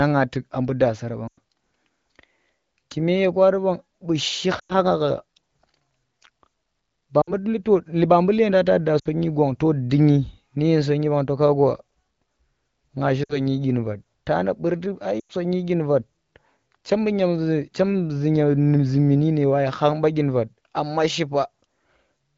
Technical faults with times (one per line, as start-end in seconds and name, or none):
1.28-1.38 lost AMR speech frames
4.59-4.73 lost AMR speech frames
7.21-7.33 lost AMR speech frames
8.99-9.08 lost AMR speech frames
13.23-13.39 lost AMR speech frames
15.20-15.32 lost AMR speech frames